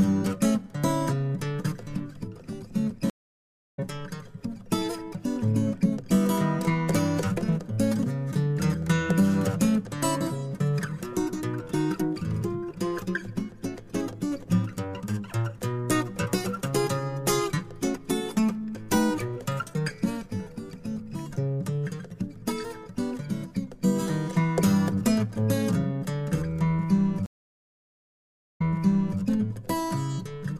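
Stream reconnects occur at 3.10 to 3.79 s and again at 27.26 to 29.20 s. Each time the connection dropped, the player went silent and then restarted its decoder partway through the stream. The first gap lasts 0.68 s, and the audio resumes roughly 400 ms further on, so material is skipped. The second gap lasts 1.34 s, and playback picks up 0.60 s earlier than where it stopped, repeating a short stretch of sound.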